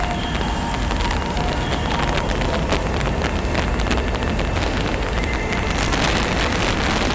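Integer overflow runs through the whole clip. The signal was driven about 8 dB past full scale, and instead of being limited, the samples that crossed the ceiling wrapped around to the opposite extreme. A few percent of samples are affected, each heard as a violent crack on loud peaks, harsher than clipping. On a waveform, the peaks jump from the top rail straight to the bottom. A spectrogram shows broadband vertical streaks at each wrap, stopping at the empty band above 8 kHz that the call codec, which fits G.722 at 64 kbps, leaves behind.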